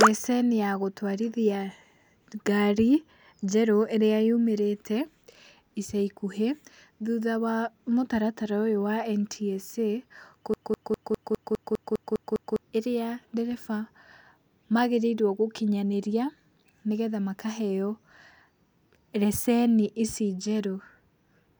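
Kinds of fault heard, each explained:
Broken-record loop: From 10.54 to 12.62 s, a 0.2 s fragment of the speech repeats exactly, back to back, ten times. The stall was likely in the player, encoder or stream, which kept resending its last fragment. The speech that belonged there is lost.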